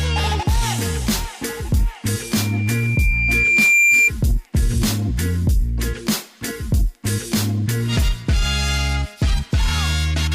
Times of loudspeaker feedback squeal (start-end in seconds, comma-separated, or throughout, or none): 2.20-4.11